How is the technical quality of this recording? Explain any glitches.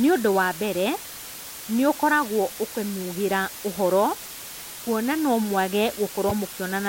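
The technical quality is poor, with a loud constant hiss and one glitch near the end.

Low bit depth with dither: the speech is rounded to about 5 bits with dither added, so the error becomes an even white hiss sitting only a little below the voice.

Damaged data in a compressed stream: at 6.29 to 6.32 s, just after "kuona nomwage", corrupt frames throw the decoder off sync, producing a brief glitch.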